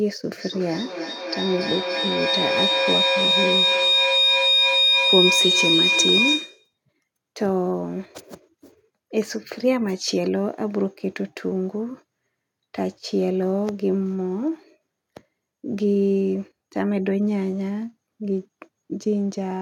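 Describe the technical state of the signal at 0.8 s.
At 0.8 s you're right inside a feedback howl that runs from 0.38 s to 6.78 s. Two devices in the same room are on the call, so the sound keeps cycling from microphone to loudspeaker and back, gaining a bit each trip. It narrows to a piercing tone around 4 kHz, with the loop repeating roughly every third of a second, and peaks about 4 dB above the speech.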